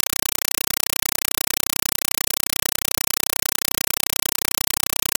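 Compressed stream played as audio, throughout: an AC-3 bitstream, likely around 256 kbps, is output as raw samples without decoding. Each frame becomes a 5.33 ms noise burst followed by silence, repeating 31.25 times a second, so very loud chattering static replaces the sound.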